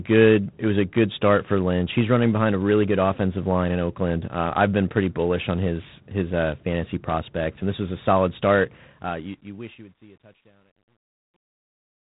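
From start to finish the speech has passed through G.726 ADPCM coding, which sends each sample as a coarsely quantised difference from an adaptive prediction. The damage is plainly audible: nothing above 3.9 kHz survives, and a harsh, rasping hiss rides on the speech and rises and falls with its level, which fits G.726 at 24 kbit/s. The same texture carries through to the end at 12.0 s.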